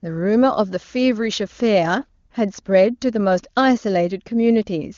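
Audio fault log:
Nothing to log here: the speech comes through clear, as you'd expect from an HD Voice call at one of AMR-WB's higher rates.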